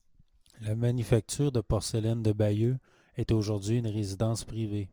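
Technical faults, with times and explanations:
Throughout, sample clock jitter: the converter's clock wobbles by a few microseconds, so each sample lands a touch early or late. That timing slip turns into an amplitude error wherever the waveform is changing fast, leaving a grainy hiss riding on the speech roughly 35 dB below it. You'll notice it thicken on louder, brighter syllables and sibilants, then drop away completely in the pauses, since a flat signal gives the wobble nothing to distort.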